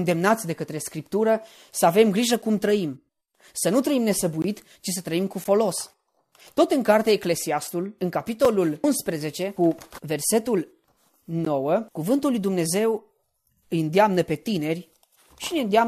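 At 4.42 to 4.44 s, between "nu trăim" and "ci să trăim cu", the speech drops into a hard-edged silence of about 20 ms. This is a gap between stream segments. The timestamps of two adjacent segments leave a small hole, and the player fills it with silence. A 13 ms gap follows at 5.44 s, just after "ci să trăim cu". A third, only 5 ms, falls at 8.45 s. The spacing fits one-second segments. No speech is lost.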